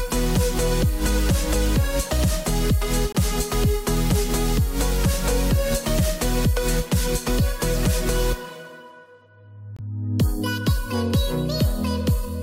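At 3.12 s the sound drops to abrupt silence for about 32 ms, and at 9.76 s a slightly longer gap of about 42 ms cuts in the same way. The second gap points to several consecutive frames rather than one. Both are corrupt frame muted faults. Bit errors damaged the compressed frames, the decoder rejected them, and the player filled their slots with silence. The timing holds steady on either side of each hole.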